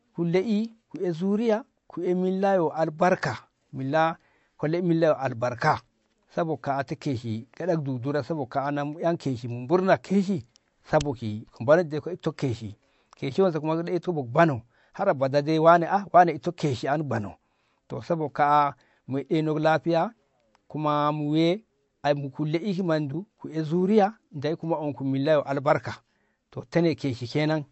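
Speech with plainly audible MP3 compression throughout: dulled treble and watery, swirling sibilants from weak frequency lines dropping out, likely from an encode around 48 kbps.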